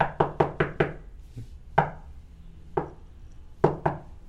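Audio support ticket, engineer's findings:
No technical faults found: the everyday sound shows no audible defect attributable to the capture, processing or transmission path.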